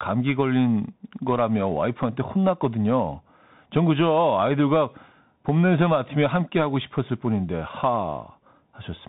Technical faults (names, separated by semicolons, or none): Bluetooth CVSD headset codec; bit error spike